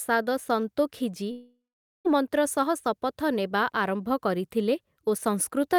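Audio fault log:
1.31–2.07 s, long network dropout: likely lost packets after "ସନ୍ତୋଖି ଜୀ" leave a fading concealment buzz, then about 0.47 s of silence, and 0.74 s of speech is skipped.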